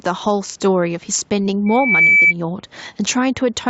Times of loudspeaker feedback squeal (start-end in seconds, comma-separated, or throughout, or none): 1.66-2.34